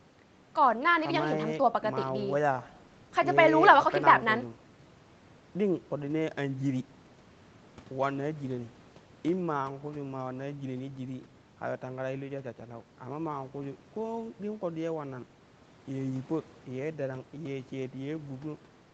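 No faults can be heard in the speech: it carries the band limit and coding character expected of a call path, with nothing above 8 kHz, which fits a wideband Opus stream at a moderate bitrate.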